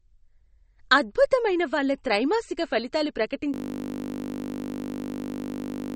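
Speech runs throughout with a watery, swirling quality, dull treble with nothing above 8.4 kHz, and smeared consonants. This plainly audible MP3 compression damage likely comes from encoding at a low bitrate, around 35 kbps, where weak frequency lines drop in and out between frames. At 3.54 s, right after "అద్భుతమైన వాళ్ళ త్రైమాసిక ఫలితాలు", the sound collapses into a steady buzz that lasts to the end. This is a system hang loop. A 20 ms slice of buffered audio repeats over a hundred times at 50 Hz while the system is frozen.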